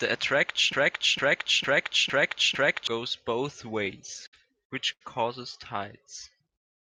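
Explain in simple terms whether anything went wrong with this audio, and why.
Yes, three separate problems can be heard in this speech recording.

From 0.73 to 2.87 s, the same slice of sound, just under half a second long (about 455 ms), plays five times in a row, like a scratched disc. This is a broken-record loop. The likely cause is that the player or stream stalled and kept resending the last piece it had. Whatever should have been heard during those two seconds is gone.

Between 3.85 and 4.35 s the speech drags and stutters. There are five brief hitches where a sound is held a little too long, the longest about 60 ms. This is repeated stalls, or stutter. Data kept arriving late, so the playback side ran out again and again and filled each wait by carrying the last sound on. About 93 ms was filled this way, roughly a fifth of that stretch, but nothing was actually lost.

At 4.93 s a single sound hangs on for about 80 ms before the speech continues. 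This is a short stall from a late packet. One piece of data arrived late, so the playback side stretched the previous sound until it came, then picked up exactly where it left off. Nothing is missing. The timing just slips for a moment.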